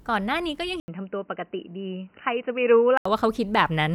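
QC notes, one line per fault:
0.80–3.05 s, input switched to a poorer device: after a gap of about 80 ms the speech turns dull and boxy, with nothing above 3 kHz, roughly 5 dB quieter and a new noise floor about 50 dB down. This is likely a change to a narrower-band input.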